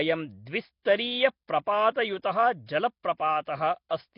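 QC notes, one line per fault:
Throughout, Nellymoser compression: the speech carries a rough, hissy haze and a smeared, underwater texture, with nothing above 5.3 kHz. This is likely Nellymoser Asao, the old Flash microphone codec. It codes short fixed blocks at a low, constant bit allowance, so quieter bands get no bits and are filled with noise. That noise is the grainy halo, and the block-wise smearing blurs consonants. The heavy damage fits a rate near 22 kbps.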